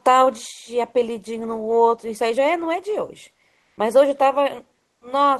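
From 3.61 to 3.77 s, the sender likely stopped transmitting during a pause (discontinuous transmission, which fits Opus DTX), so the receiver substituted comfort noise in place of the background for about 160 ms. The real background, about 49 dB below the loudest sound, becomes a flat, featureless hiss at the same level.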